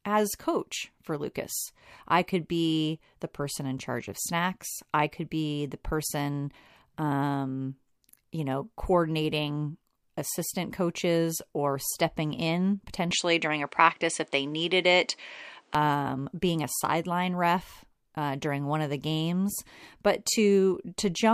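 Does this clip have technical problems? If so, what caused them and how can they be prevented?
Yes. From 13.11 to 15.75 s, just after "coaches or stepping in" and until "um being a sideline", the speech turns duller, with nothing above about 9.9 kHz. A faint new background noise appears well below the voice, while the level stays about the same and there is no gap at the change. This points to an input switched to a poorer device: the system likely moved mid-recording to a narrower-band microphone or headset profile, then returned to the original. To prevent it, lock the recording input to one chosen device and turn off automatic device switching.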